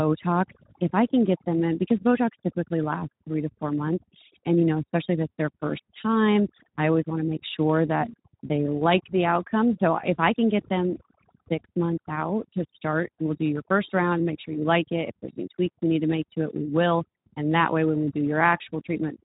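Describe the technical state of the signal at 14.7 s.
At 14.7 s, as throughout the clip, overdone noise removal zeroes frequency bands near the noise estimate, leaving near-silent gaps with twinkling specks, unlike steady hiss. The Speex codec is also present throughout: starved excitation coding makes the speech noisy and hoarse, with nothing above 3.8 kHz, which fits a low setting around 11 kbps.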